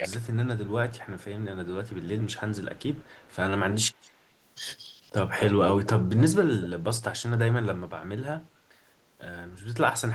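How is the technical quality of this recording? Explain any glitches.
The recording has two echo-control problems: a brief suppression dip at the start and repeated echo leak.

From 0.0 to 0.19 s the speech drops by roughly 15 dB. This is likely speech suppressed in double talk: with both ends active, the canceller ducked the near talker too. Unlike an echo leak, it removes sound rather than adding a copy.

Echo leak appears at 0.21–0.27, 0.66–2.35, 2.76–3.36, 3.9–4.14, 5.37–5.52 and 6.61–6.67 s. A delayed copy of the speech comes back 269 ms late, then 227 ms late from 3.9 s. It is faint, about 30 dB down, until it rises to about 10 to 15 dB below the speech at 5.37 and 6.61 s. The likely cause is a loudspeaker echo the far-end canceller did not fully remove. The fixed delay sets it apart from room reverberation.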